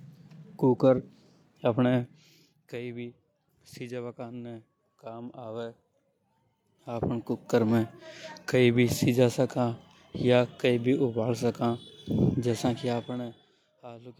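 A speech clip with zipper noise from 6.58 to 7.56 s. During that stretch the level moves by roughly 15 dB. The change is not smoothed. It arrives in discrete jumps, around fifty a second. Each jump makes a small click in the waveform. Together the clicks form a rapid ticking, or zipping, laid over the speech while the gain travels. That step rate fits a gain value updated once per audio buffer rather than ramped sample by sample.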